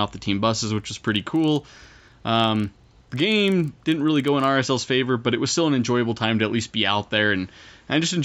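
A speech clip with a resampler restarted on every block from 0.76 to 4.48 s: a 25 Hz buzz from 40 ms block-edge errors, showing as evenly spaced vertical spectrogram lines.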